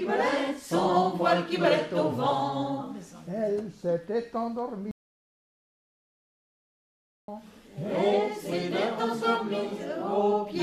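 At 4.91 s the audio cuts out abruptly in mid-flow. It stays dead until 7.28 s, then returns just as suddenly. This is an audio dropout to silence. The gap is silent, with no room tone or background left. About 2.37 s of sound is simply missing. The likely cause is a lost input, such as a dropped connection or a brief mute, while recording carried on writing silence.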